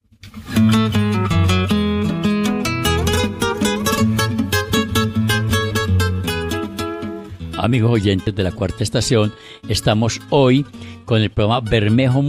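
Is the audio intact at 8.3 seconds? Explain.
No. At 8.27 s there are compressed frames skipped: a couple of frames never reach the output, whether missing from the file or rejected by the decoder as damaged, so playback jumps ahead by about 40 ms. The join is heard as a brief discontinuity where the audio jumps.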